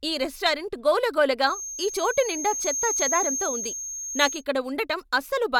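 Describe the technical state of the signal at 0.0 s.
At 0.0 s the speech signal is intact, with no audible technical fault at that moment.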